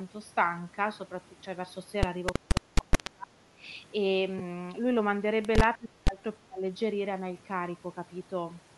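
Bluetooth LC3 compression runs through the whole speech recording, with plainly audible codec damage: the upper band sounds thinned and partly replaced by grainy noise, giving consonants a breathy, rough edge. That points to the LE Audio transform codec working at a modest rate, something like 48 kbps with short 7.5 ms frames, which has to discard much of the high spectrum and fill it with synthetic noise. Speech suppressed in double talk appears from 2.39 to 3.63 s, again from 5.77 to 6.2 s, and from 6.39 to 6.63 s. In these spans the talker's level dips sharply, by roughly 30 dB at the deepest in the first two and about 25 dB in the third, adding up to well under a second in the first span. The likely cause is an echo canceller that could not tell the near talker from loudspeaker echo while both sides spoke and turned both down. Lost LE Audio frames cause a brief smeared, noisy blip from 4.38 to 4.41 s, about 15 ms of missing audio, which fits two lost 7.5 ms frames. 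The decoder concealed the gap by repeating the last spectrum with scrambled phase, so the sound turns hazy for that moment instead of cutting to silence.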